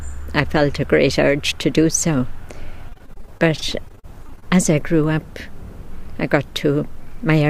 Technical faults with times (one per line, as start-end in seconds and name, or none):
2.89-4.56 repeated packet loss (robotic sound)